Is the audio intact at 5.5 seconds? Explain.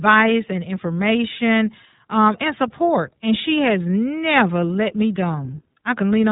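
No. At 5.5 seconds the speech is still carrying iLBC codec damage, which runs through the whole clip. Nothing above about 3.8 kHz survives, so consonants lose their crisp upper band and the sound is narrowband and muffled. The codec encodes each short block of excitation on its own, consistent with 20 ms frames at a rate fitting 15.2 kbps. At 5.5 seconds this gives the speech a plainly audible rough, slightly synthetic texture.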